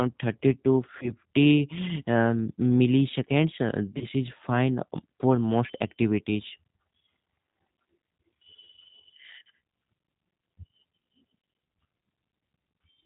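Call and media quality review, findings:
G.729 codec throughout: band-limited, slightly rough and synthetic speech, with plainly audible coding damage and nothing above 4 kHz. Consistent with G.729A at 8 kbit/s. Speech is rebuilt from a vocal tract filter, pitch predictor and sparse pulses per 10 ms frame.

VoIP packet loss concealed by the speech codec, 0.98–1.13 s and 3.98–4.05 s (second just before "is fine for most"). Brief buzzy or noisy, fading extrapolated sound, with weak or distorted speech persisting after. Each gap fits a single lost 30 ms packet. Decoder repeats its last pitch and filter at falling gain, then needs frames to recover.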